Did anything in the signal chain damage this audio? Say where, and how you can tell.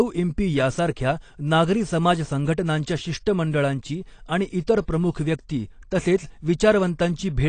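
Yes, at the codec stage, likely from AAC compression. Throughout the speech, nothing survives above 9 kHz, and plainly audible codec damage leaves the sound dull and smeared, with fizzy sibilants. That fits AAC-LC at a low bitrate, around 32 kbps, quantising coarsely and discarding high bands.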